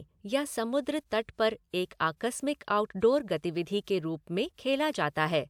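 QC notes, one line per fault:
Nothing to flag on this speech clip; no faults turned up anywhere in it.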